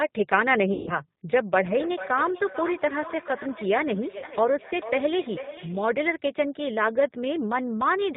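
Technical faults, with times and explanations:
Throughout, G.729 codec: the speech is rebuilt at 8 kbit/s from a vocal tract filter, a pitch predictor and a few pulses per 5 ms subframe, so it sounds plainly rough and synthetic. A spectrogram shows nothing above 4 kHz and smeared, simplified harmonics.
0.73–0.96 s and 4.18–4.25 s, VoIP packet loss concealed by the speech codec: about 140 ms and 40 ms of audio went missing. The decoder stretched its last pitch and filter into sound that fades, and the sound stays weak briefly afterwards. The waveform shows a decaying envelope, and the spectrogram shows frozen, flat bands.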